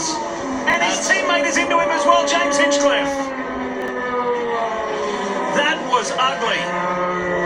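At 0.70 s and again at 3.82 to 3.88 s, chunks out of order: a 20 ms block plays one, then two, blocks late, leaving a brief jumbled stutter at the hard joins.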